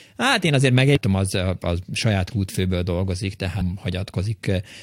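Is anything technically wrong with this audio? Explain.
Yes, there's damaged data in a compressed stream at 0.95–0.97 s and 3.60 s. Corrupted bytes throw the decoder off sync, so you get brief blips.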